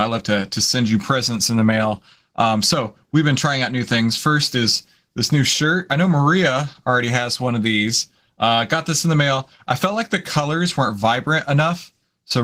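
From start to finish the speech has a plainly audible coded texture, hoarse and faintly robotic. This is Opus voice compression working in hybrid mode. The linear-prediction coder handles the lower band and a transform layer covers the top, which keeps the full audio band. Too few bits are left to code the excitation finely, which fits a bitrate around 16 kbps in 20 ms frames.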